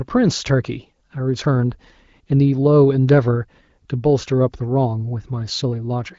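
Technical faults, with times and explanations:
No faults found; the speech runs over an AMR wideband (HD Voice) link with nothing above about 7.6 kHz and the light coding texture of a higher rate, which fits roughly 16 kbit/s.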